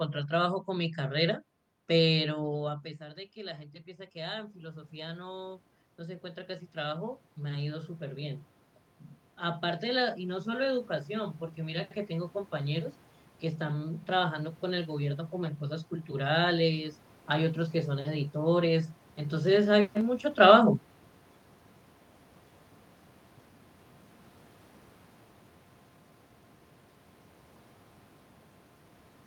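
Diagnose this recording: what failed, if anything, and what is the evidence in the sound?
Automatic gain rising in the call processing stage: after the input dropped about 17 dB, the AGC spent 2.4 to 8.43 s raising gain about 11 dB, then another 3 dB from 13.66 to 16.2 s. Room noise swells with the voice, unlike a talker moving closer.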